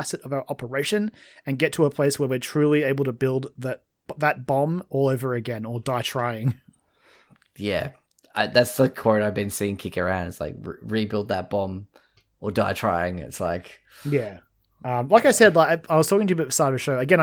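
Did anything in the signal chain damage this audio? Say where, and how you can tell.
No, nothing in this speech recording stood out on listening as damage from any stage of the signal chain.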